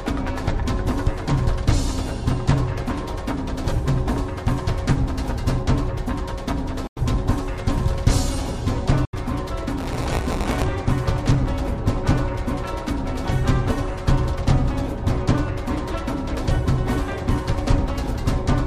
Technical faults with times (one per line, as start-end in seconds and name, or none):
6.87-6.99 Bluetooth dropout
9.05-9.14 Bluetooth dropout
9.78-10.66 buffer tearing